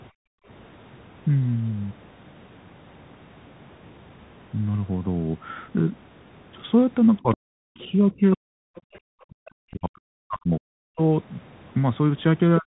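Throughout, the speech sounds narrow and grainy, with nothing above 4 kHz, a granular hiss underneath, scratchy s sounds and distortion on loud bright moments. This is the Bluetooth CVSD headset codec: its one-bit-per-sample delta coding at 64 kbps cannot keep up with fast changes.

From 0.11 to 0.47 s the room sound is pulled down by about 40 dB and then returns. This is background gated by the echo canceller, which clamped the microphone hard for roughly 0.4 s while the loudspeaker was active.

Faint scraps of a second voice surface at 7.17 to 7.35 s, 7.79 to 7.88 s, 8.76 to 8.99 s and 9.46 to 9.50 s. They sit roughly 30 dB below the main speech, and nearer 25 dB below it in the 7.79 s scrap. This is likely the other side's voice leaking through, as loudspeaker sound that the echo canceller did not fully remove.

Overlapping these, the talker's speech sinks and breaks up from 7.19 to 8.61 s, from 9.09 to 11.01 s, and again from 12.59 s to the end, with drops of around 40 dB. 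This is speech suppressed in double talk: with both sides likely talking at once, the canceller could not separate the talker from the echo and turned everything down.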